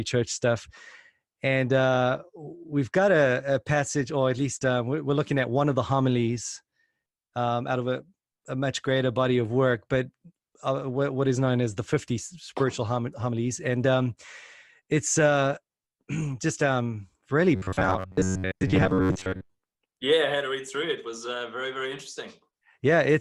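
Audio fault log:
17.56–19.62 s robotic sound from repeated short buffers: a rigid metallic buzz at 93.8 Hz, likely from a 10.7 ms chunk replayed over most of the span; its fixed pitch sets it apart from stutter.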